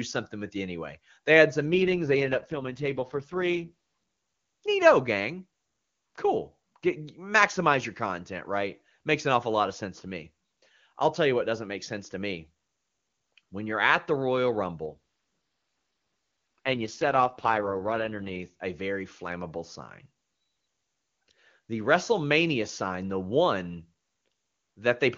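Two AMR rate drops, from 1.67 to 3.70 s and 14.86 to 18.40 s. The speech turns raspy and synthetic with no gap or band loss, which fits a fall from the clean HD Voice rate to 6.6 kbit/s on a weak link.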